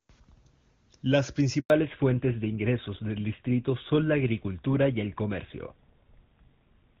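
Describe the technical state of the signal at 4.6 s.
Fallback to narrowband, running from 1.7 s to the end: the call has dropped from HD Voice to a narrowband codec, which fits GSM full rate, so nothing above 4 kHz survives and the speech sounds duller and rougher.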